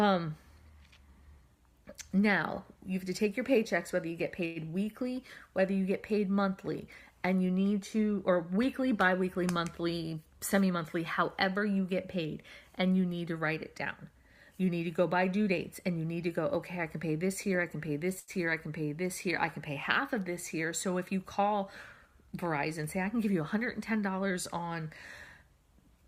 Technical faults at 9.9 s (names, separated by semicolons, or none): jitter buffer speed-up